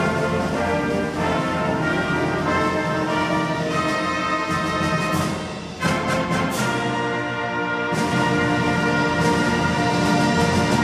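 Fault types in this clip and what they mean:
Doubled audio track: from 8.12 s an equally loud, undecayed full-band copy trails by about 1.5 s; spectrogram shows each event repeated, with the copy starting abruptly.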